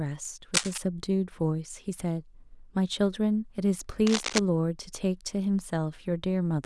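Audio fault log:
0.54–0.78 s and 4.07–4.39 s, cable scratch noise: two short bursts of dense, ragged scratching sit over the speech, the first about as loud as the talker, the second a little quieter. That's likely a worn cable or connector being moved, its contact resistance jumping around.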